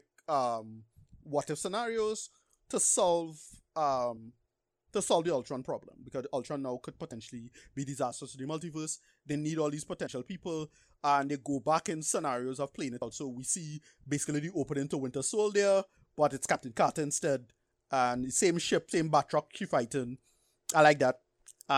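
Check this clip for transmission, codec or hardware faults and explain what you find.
One fault type appears: audio missing between chunks. The speech skips at 7.12, 10.07, 13.02, 15.97 and 18.92 s. Each time, about 50 ms vanishes with no gap. This is likely from processing in 3.0 s chunks.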